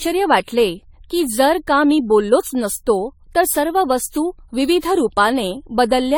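Throughout, the speech sounds swirly, smeared and hollow, with blurred attacks and nothing above 18.9 kHz. This is generation loss, likely from about seven AAC passes.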